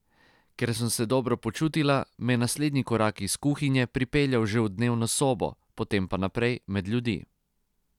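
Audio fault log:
Nothing to log here, as I couldn't hear any faults anywhere in this bit of speech.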